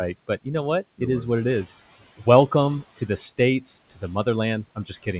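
From 4.75 s to 5.07 s, speech is cut by the noise suppressor. It mistakes part of the speech for background and turns it down, by about 13 dB at the deepest. Around 150 ms in all is affected. Those moments sound swallowed and faint.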